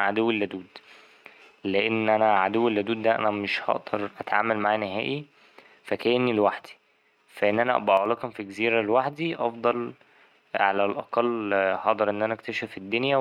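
At 7.97 s, just after "فا إن أنا أبقى", the speech level drops abruptly by about 6 dB. It recovers at 8.06 s, before "في جزيرة لوحدي أفضل". The dip lasts about 80 ms. The likely cause is one channel dropping out. When only one side carries the signal, the mono sum halves. Sound present in both channels falls by 6 dB, and anything carried by the lost channel alone vanishes.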